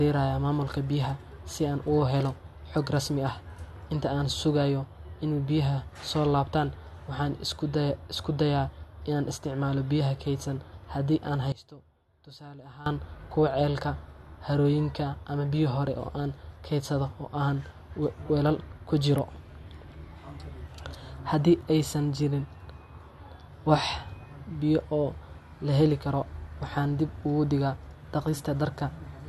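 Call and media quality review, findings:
Speech level collapses 11.52 to 12.86 s, down about 18 dB, leaving a faint residue. Likely one channel inverted, so opposite polarity cancels centred content on mono sum. Waveform shows an abrupt envelope dip; spectrogram dims across all bands over that span.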